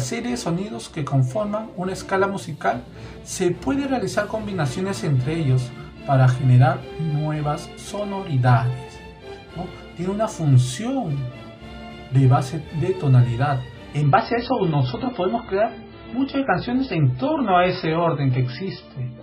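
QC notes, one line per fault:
14.02–19.22 s, adaptive stream at a lower bitrate: at 14.02 s the sound switches abruptly, with no gap, to a thinner, swirly rendition with nothing above 5.6 kHz. This fits the player dropping from a 128 kbit/s MP3 stream to a 16 kbit/s one after the connection slowed.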